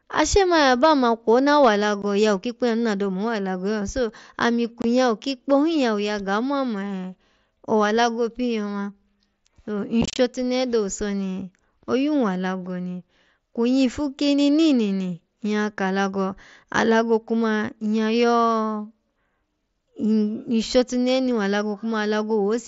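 From 0.18 to 0.92 s the speech shows hard clipping. The level runs about 3 dB past what the chain can pass, so the waveform peaks are sheared flat. Those flat tops add high harmonics, which you hear as a crackly edge on the louder syllables. It recurs more briefly from 1.62 to 1.68 s, right after "kwo na", with the overdrive at about 4 dB, and gives a brief crackle on the peaks.

Unconcealed Bluetooth headset packet loss follows. The speech is carried over the wideband mSBC headset link, and nothing fills in the missing packets. At 2.02 s a 15 ms hole opens with abrupt edges, which fits two lost 7.5 ms frames. From 4.82 to 4.84 s a 22.5 ms gap cuts in the same way. Between 10.02 and 10.18 s the losses are scattered across 165 ms, with 97.5 ms missing in total and the longest gap 30 ms, so the speech sounds chopped and rough there.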